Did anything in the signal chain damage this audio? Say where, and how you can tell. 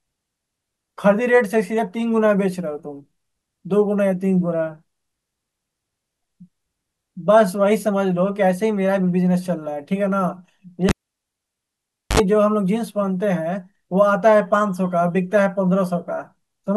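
Yes, in the analogue wiring: a cable pulled and plugged in, 10.89–12.20 s. Waveform spikes bracket a flat 1.26 s gap; 65 ms of 50 Hz buzz shows as spectrogram stripes before reconnection.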